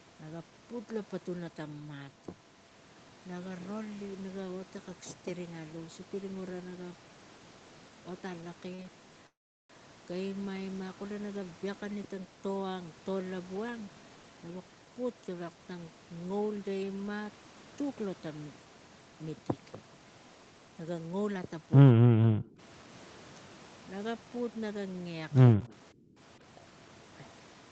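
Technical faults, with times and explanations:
8.75–8.80 s and 8.82–8.87 s, short stall from a late packet: The speech is held too long twice in quick succession. A packet arrived late and the jitter buffer ran dry. The receiver stretched the last sound, by 38 ms and then 22 ms, until the packet came in. It then picked up from the same point. Nothing is lost. The timing slips a little later each time.
9.27–9.71 s, call audio freeze: The speech stops for about 0.43 s. Most of that, about 0.38 s, is silence, after a brief fading continuation of the last sound. Packets were likely held up in transit and the jitter buffer emptied. The receiver filled the wait, then carried on where it had paused. So a gap has been inserted, and no speech is missing.
13.50–14.61 s, 20.65–21.09 s and 26.38–27.55 s, jitter buffer speed-up: The speech runs hurried at an unchanged pitch. That is 113% speed in the first stretch and 110% in the other two. 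The buffer was holding more audio than its target. To cut the delay, the receiver removed many tiny pitch-period slices in a row. Roughly 150 ms went from the first and last stretches, and about 50 ms from the middle one.
21.93–22.59 s, 25.55–25.71 s and 25.92–26.19 s, speech suppressed in double talk: The speech dips sharply, by about 40 dB in the first stretch. It falls by about 10 dB and about 20 dB in the two shorter ones. The likely cause is both sides talking at once. The echo canceller could not tell its own talker from loudspeaker echo. It turned everything down.
25.61–25.73 s, echo leak: A faint delayed copy of the speech comes through, about 35 dB below it. It trails the original by 168 ms. It overlaps the brief dip at 25.55 s. This is likely residual echo. A loudspeaker fed the microphone, and the echo canceller did not remove it all. The scrap was sent back quiet.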